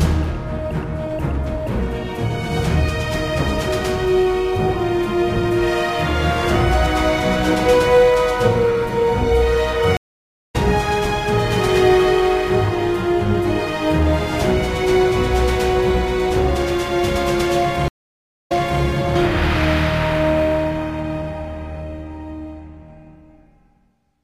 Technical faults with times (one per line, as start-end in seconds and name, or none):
9.97-10.56 stream reconnect
17.88-18.82 stream reconnect